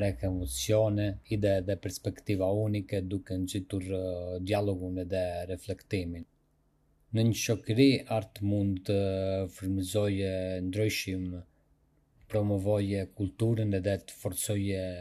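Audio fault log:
No faults heard in this speech recording.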